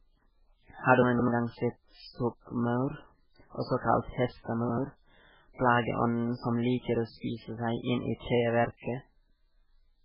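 From start to finish the speech sounds watery and swirly, with heavy codec damage and nothing above about 5.3 kHz. This is likely MP3 compression at a very low bitrate, around 8 kbps. Starved of bits, the encoder drops weak frequency lines that flicker in and out between frames and cuts the treble at a fixed point, and attacks smear.

From 1.02 to 1.28 s, just before "gang sett stokkmaur", there is a jumbled moment. The audio is chunks out of order: a chunk of about 85 ms plays two chunks late, after the audio that should follow it. Nothing is missing, but the sequence is scrambled and there are three hard joins. A shorter scramble comes from 4.61 to 4.78 s, right after "også kalt", where an 85 ms chunk plays one chunk late.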